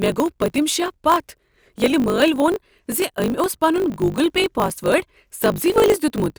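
Throughout the speech, a block size mismatch (truncated) is at work. One stage writes longer blocks than the next reads, which fits 1024-sample writes, and each block's tail is discarded. This leaves a steady 50 Hz buzz, with speech running 1.16 times fast with its timbre intact.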